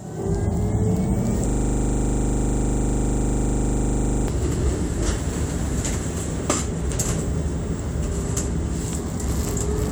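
A system hang loop freezes this recording of sounds from 1.49 to 4.28 s: the driver stalled while the hardware kept replaying one 40 ms buffer, so a single slice repeats dozens of times, producing a rigid 25 Hz buzzing stutter.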